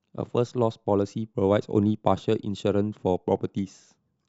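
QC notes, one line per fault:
Nothing to flag here, the speech comes through without a single glitch worth noting.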